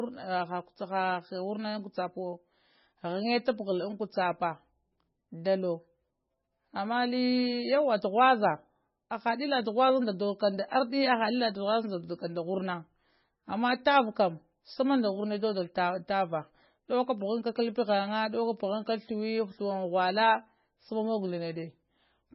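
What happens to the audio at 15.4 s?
At 15.4 s the speech has the heavy damage heard through the whole clip. Nothing sounds above 5.6 kHz. Weak frequency parts flicker between frames, so it sounds watery and swirly, and onsets smear. The likely cause is MP3 compression, at a bitrate fitting about 17 kbps.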